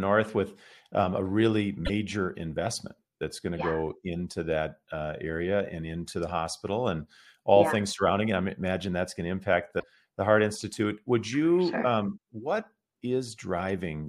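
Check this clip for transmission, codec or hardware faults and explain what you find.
Two faults are present, both from damaged data in a compressed stream. They occur from 1.82 to 1.90 s and from 9.76 to 9.84 s, each lasting about 80 ms. The speech breaks into a brief garbled blip. Corrupted bytes make the decoder misread those frames. It loses sync, then recovers at the next valid frame header.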